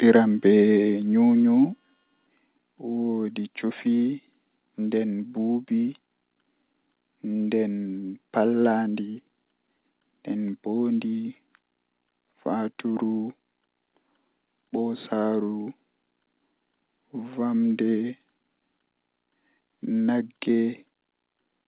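Microphone overload at 0.09 to 0.16 s: the opening peaks are driven about 2 dB past the converter's limit, so their tops are flattened and a small fraction of the waveform is sliced off. The result is a brief, harsh crackle on the loudest moment. Too much input gain at the microphone is the likely cause, with the converter unable to represent anything beyond its ceiling.

Microphone volume stepped down at 1.02 s and again at 2.04 s: the whole signal, background included, drops abruptly by about 3 dB and then about 4 dB. Each change lands as a single step rather than a gradual fade, which is likely what happens when call software, reacting to the earlier overload, cuts the device's input level. Heard through the call path, where nothing reaches above 4 kHz in a band that fits 64 kbps G.711 mu-law, these drops make the sound suddenly quieter.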